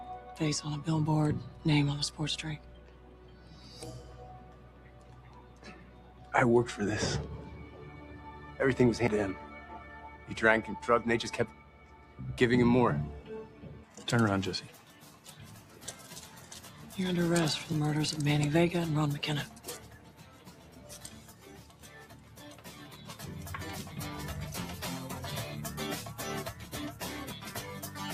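Noise suppressor applied to music or sounds, throughout: a suppressor built for speech stays active across the whole clip and treats sustained, steady material as noise. The gain it applies swings by around 10 dB as it decides moment to moment what to keep. Onsets pass largely intact while held tones and decaying tails are pulled down, so the level pumps and the sound loses body between attacks.

Sound cut by the noise suppressor, from 2.59 to 3.65 s and again from 4.42 to 6.33 s: in these stretches the suppressor classes the sound as noise and lowers it harder than its surroundings, by about 5 dB at the deepest. The sustained parts sag and their decays are shortened, while any sharp transients still come through at nearly full level.

CD skip at 9.07 s: a disturbance to the laser makes the player lose its track and jump to another turn of the disc's spiral. It mutes for only a few milliseconds, heard as a small tick, and playback resumes from a different point. 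The result is an abrupt discontinuity, a jump forward or back by a fraction of a second, rather than a gap.

Sound cut by the noise suppressor, from 11.51 to 12.19 s, 19.85 to 20.88 s, 21.21 to 21.83 s and 22.14 to 22.38 s: the same misclassification recurs, with dips of about 5 dB in the first three and about 4 dB in the brief last one.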